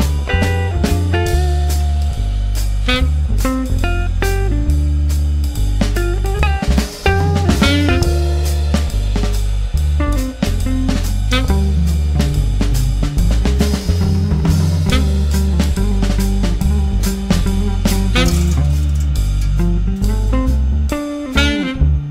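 Hard clipping runs throughout the clip. The signal arrives at some stage about 9 dB hotter than that stage can pass, so whenever a peak tries to exceed the ceiling it is sliced flat. Only a small fraction of the waveform, well under one percent, actually crosses the limit, so the damage lands on the loudest moments: a brief crackle or gritty edge on each peak, where the squared-off tops spray harmonics high into the spectrum.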